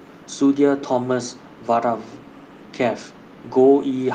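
At 0.8 to 0.87 s a faint delayed copy of the speech trails in, about 20 dB below it. It recurs more quietly at 1.31 to 1.65 s, 2.18 to 2.72 s and 3.13 to 3.49 s, about 35 dB down. Each copy lags by 259 ms. This is echo leak. The likely cause is a far-end loudspeaker whose echo canceller let part of the microphone pickup return down the line.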